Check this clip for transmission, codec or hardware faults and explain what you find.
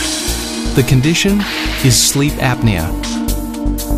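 Nothing in the signal points to a transmission, codec or hardware problem; the audio stays continuous throughout.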